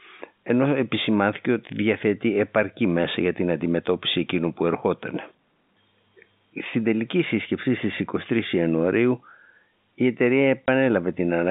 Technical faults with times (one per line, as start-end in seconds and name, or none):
10.66 packet loss filled with silence